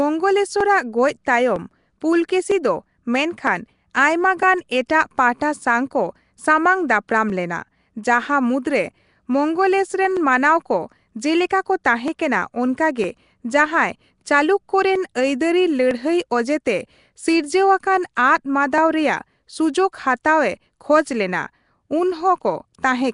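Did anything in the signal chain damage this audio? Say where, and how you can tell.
Yes. At the codec stage, the whole clip carries plainly audible damage, likely from Nellymoser compression: nothing remains above 10.6 kHz, and speech has a rough, hissy halo and smeared, underwater quality, as weak bands are starved of bits and filled with noise.

In the driver or buffer stage, clock drift buffer slips, likely from two devices on mismatched clocks, appear as regular clicks every 0.958 s from 0.61 s to 22.61 s, about twenty in all. Each is a small block of samples, roughly thirty, dropped or repeated as the buffer overflows or runs dry.

The codec also leaves pre-echo at 4.88 s and 11.84 s: a short hiss, 12 ms and 11 ms long respectively, runs ahead of a sharp attack, and the attack sounds softened. Quantisation noise meant for the loud onset is spread across the quiet start of its block.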